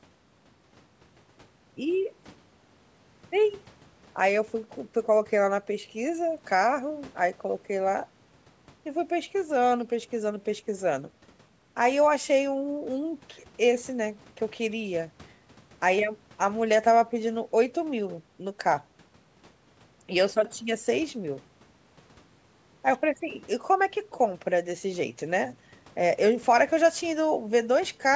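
Nothing's wrong with this speech recording: it came through a call's microphone processing, so the very lowest bass is trimmed away and nothing reaches above 8 kHz, which is just how that path normally sounds.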